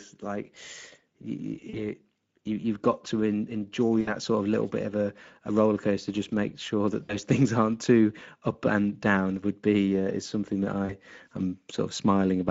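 Speex codec damage runs through the whole clip. This CELP speech coder has a limited bit budget for the excitation signal, and the result is speech with a hoarse, grainy edge and a plainly audible noisy roughness around the voice. The degree of damage suggests a middle-quality mode of roughly 16.8 kbps. At that setting any content above 4 kHz is only a shaped, noise-like fill, not real detail.

VoIP packet loss concealed by the speech codec appears at 1.69–1.86 s, 4.01–4.16 s, 7.03–7.16 s and 10.85–10.93 s. About 40 ms of audio is missing at the first and last points, and about 60 ms at the middle two. At each gap the decoder keeps repeating its last pitch and filter while lowering the gain, so the sound smears into a brief buzzy tone or coloured noise that fades. Because each frame is decoded from the one before, the voice stays weak or distorted beyond the lost span until the decoder recovers.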